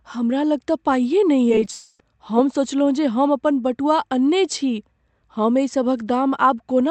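Repeated packet loss (robotic sound) runs from 1.49 to 1.67 s. Four short holes open in the speech stream. The longest is about 10 ms, and together they lose about 40 ms. The receiver patches each hole by extending the last bit of sound, so about a fifth of this stretch is synthetic filler. The speech comes out choppy, and small fragments are skipped.

At 1.71 s, almost right after, the real speech stops until 2.00 s. That is a gap of roughly 0.3 s, with about 280 ms of audio missing. It never falls fully silent. The whole gap is filled with a smeared continuation of the preceding sound that fades as it goes. The speech then resumes without the lost portion. The likely cause is a long network dropout. The audio came through a call path whose band stops near 8 kHz, which fits Opus at about 32 kbps.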